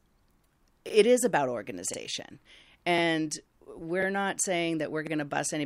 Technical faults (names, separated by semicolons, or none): overlapping chunks